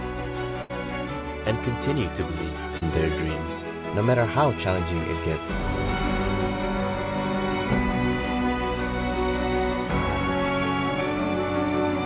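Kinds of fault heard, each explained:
Burst of packet loss: At about 0.62 s a run of audio, roughly 80 ms' worth, simply never arrived in time, so the receiver kept the last sound going and let it fade for around 70 ms to cover the hole. You hear it as a brief held, dying tail before things pick up again at about 0.71 s, with that stretch of the original gone rather than delayed.
Short concealed packet loss: A smaller drop, around 40 ms, lands at about 2.77 to 2.83 s. The receiver patched it by extending whatever was playing, pitch-following if the sound was tonal, shaped noise if not, then crossfaded back into the real signal. It comes across as a quick smear or wobble, all heard through the narrow G.711 band that stops at 4 kHz.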